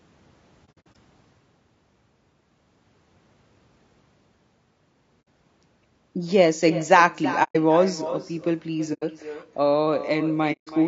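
Throughout the speech, an echo with no canceller follows each phrase about a third of a second later. It sits about 13 dB down and sounds thin.

The voice is rough and grainy, with a dull, synthetic top. Low-delay AAC compression, likely AAC-ELD near 32 kbps, would explain it.

AAC frame loss with muting then cuts soft-faded holes. From 0.65 to 0.96 s, 180 ms drops out in short bursts. Others hit at 5.21 s (60 ms), 7.43 s (120 ms), 8.93 s (90 ms) and 10.52 s (150 ms).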